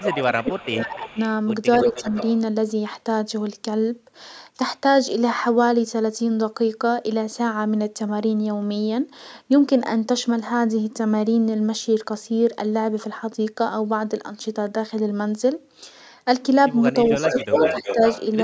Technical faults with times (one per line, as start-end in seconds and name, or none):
0.00-1.18 speech suppressed in double talk
0.18-1.19 echo leak
1.81-2.31 echo leak
1.89-2.06 speech suppressed in double talk
17.05-18.25 echo leak
17.07-18.02 speech suppressed in double talk